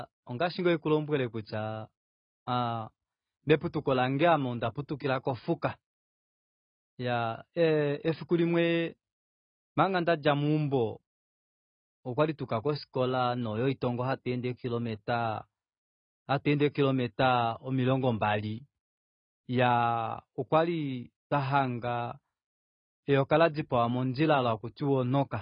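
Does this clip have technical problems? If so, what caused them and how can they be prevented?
Yes. Throughout the speech, nothing is present above 5 kHz, and the sound is dull and smeared with a fizzy, warbling texture on sibilants, heavy damage that points to AAC compression, likely AAC-LC at a low bitrate around 16 kbps. Encoding at a higher bitrate prevents this.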